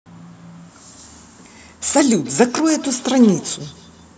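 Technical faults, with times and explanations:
2.25–4.09 s, feedback echo between two devices: thin, ringing repeats trail the speech roughly every 150 ms, about 21 dB down, as another device's playback re-enters this microphone.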